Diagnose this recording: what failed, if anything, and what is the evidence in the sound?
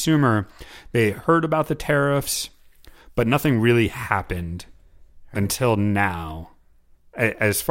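Nothing failed here; listening through the speech, there's no audible fault at any stage of the chain to point to.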